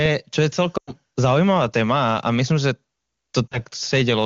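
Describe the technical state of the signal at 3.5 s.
Lost AMR speech frames span 3.49 to 3.59 s, a roughly 40 ms gap consistent with two dropped frames in the 23.85 kbit/s AMR-WB stream. Failed checksums force the decoder to repeat prior pitch and vocal-tract parameters with falling gain, so the sound drops to near silence within the two frames before speech resumes weak or rough.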